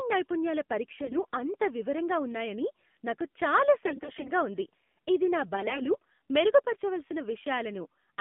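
AMR narrowband mobile codec damage runs through the whole of this speech clip: the sound is confined to roughly 150 Hz to 3.6 kHz, and the voice has the buzzy, synthetic edge of a low mode, which fits about 7.4 kbps. At that rate, each 20 ms frame carries only a sparse set of excitation pulses to drive the vocal-tract model, so fine detail in the voice is replaced by coarse approximations. AMR bit errors appear at 1.02–1.40 s, 3.86–4.31 s and 5.56–5.90 s, with the middle burst the worst. In each stretch the voice keeps roughly its pitch and loudness but turns hoarse, scratchy and gargly. The cause is flipped bits in the weakly protected part of the frames, about 7% in the first and last bursts and about 10% in the middle one. Because the checksum over the critical bits still passed, the decoder used the damaged frames instead of discarding them, placing the excitation pulses wrongly and skewing the fine gain and spectral values.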